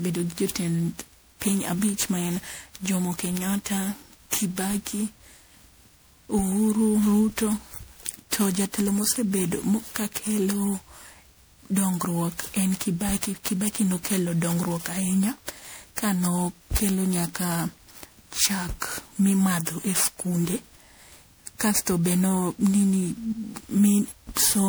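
From start to finish the speech has that swirly, hollow, smeared quality of generation loss, with consonant attacks blurred. It's likely from being re-encoded as MP3 around ten times, which fits a 128 kbit/s setting, each pass stacking fresh quantisation noise and spectral holes.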